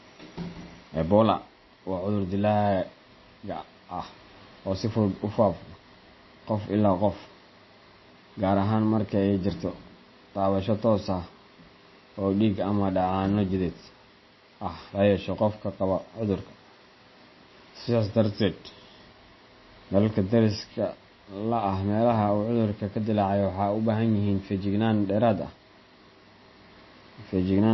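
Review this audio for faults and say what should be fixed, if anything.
Likely MP3 compression throughout, fitting about 24 kbps: the encoder cut everything above 5.8 kHz and dropped weak frequency lines, leaving the speech dull and plainly watery. To prevent it, encode at a much higher bitrate or deliver from an uncompressed master.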